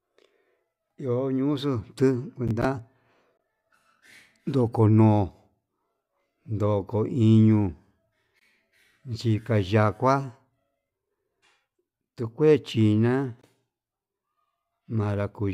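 Gap between chunks occurs at 3.37 to 3.39 s, 8.39 to 8.41 s and 13.41 to 13.43 s, each a 20 ms hole in the speech. The audio arrived in 5-second chunks, and a short stretch of silence was left at every join, so the speech is interrupted rather than shortened. It sounds like a brief dropout, and it recurs at the same regular spacing across the clip.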